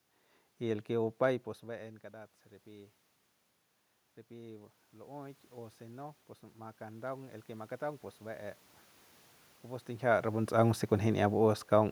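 From 4.27 to 8.63 s, automatic gain rising slowly adds about 8 dB; room noise swells along with the voice, which a talker moving closer would not cause.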